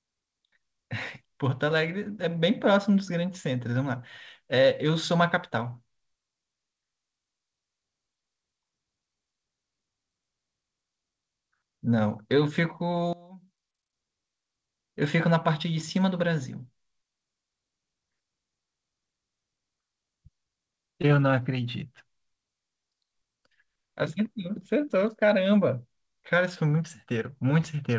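A speech recording sent over a WebRTC call, band-limited with nothing above 8 kHz, as fits a G.722 wideband codec, shows two faults. From 13.13 to 13.93 s, one channel inverted is the likely cause: with one stereo side's polarity reversed, the centred voice cancels against its twin when the channels are summed to mono. The level drops by about 22 dB, leaving only a faint residue of the speech. Then from 21.02 to 21.05 s, short concealed packet loss appears. About 20 ms of audio never reached the decoder, and the receiver covered roughly 14 ms of that gap by extending the preceding sound before blending back into real audio. The result is a brief smear or wobble in the speech there.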